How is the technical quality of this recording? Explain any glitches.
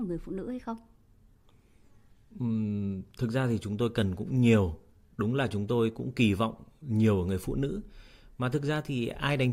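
Nothing here needs explaining, because the recording has no glitches at all and there is nothing technical worth flagging.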